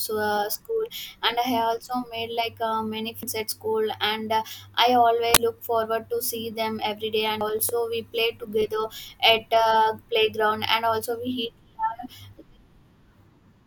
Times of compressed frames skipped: 3.14-3.23, 5.18-5.37, 7.41-7.78

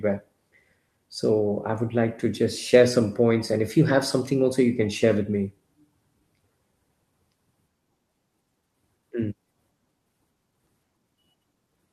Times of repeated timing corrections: 0.11-11.67

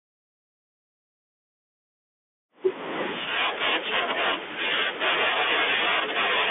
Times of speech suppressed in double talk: none

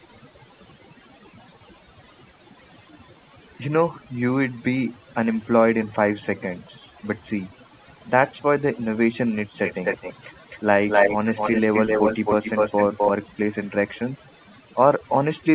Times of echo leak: 9.66-10.60, 10.88-13.12, 14.43-14.47

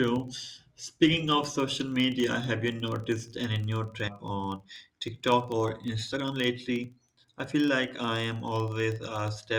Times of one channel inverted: none

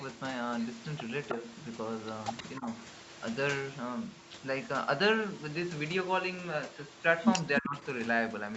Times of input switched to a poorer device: none

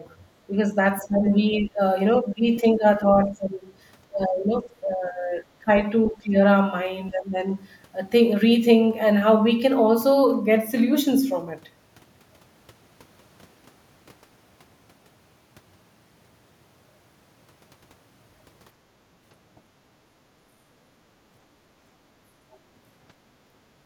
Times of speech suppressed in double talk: 0.49-1.27, 1.58-1.80, 2.17-3.60, 4.09-6.35, 7.10-7.38

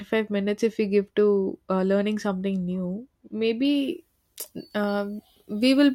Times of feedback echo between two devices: none

